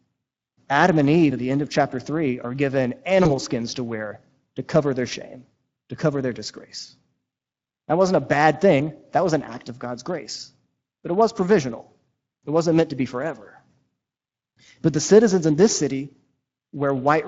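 Throughout, the speech carries Speex codec damage that is plainly audible: a hoarse, grainy texture where the CELP coder has too few bits for the excitation. It fits a Speex mode around 20 kbps. A spectrogram shows smeared harmonics with noise filling the gaps between them.

From 3.23 to 3.31 s, between "are given" and "skins to wear to", VoIP packet loss concealed by the speech codec appears, pointing to a single lost 20 ms packet. The decoder stretches the last sound into a brief, fading extension that lingers past the gap. The waveform shows repeated periods decaying in level.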